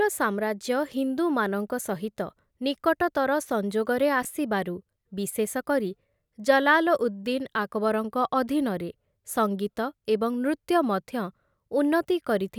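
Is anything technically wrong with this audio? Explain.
Yes. At about 4.23 to 4.25 s the speech briefly jumbles. This is chunks out of order: one 5.8 ms chunk arrived late and played three chunks after its proper place, so nothing is lost, but the sequence scrambles at three hard joins.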